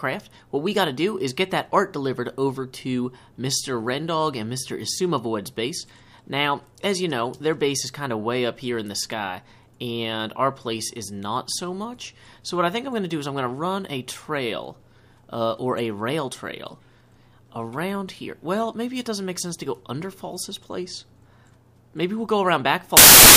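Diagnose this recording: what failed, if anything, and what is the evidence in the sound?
Sample-format conversion failed: samples built from the wrong bytes from 22.97 to 23.36 s, heard as loud, harsh broadband noise as misordered low bytes dominate each value.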